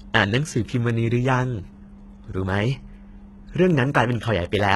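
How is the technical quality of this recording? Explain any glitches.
The recording is degraded throughout: the treble sounds gritty and metallic, with s sounds turning lispy and nothing above 11.8 kHz. This is likely HE-AAC compression, whose synthetic copied treble misaligns harmonics, heavy damage fitting a low bitrate around 16 kbps.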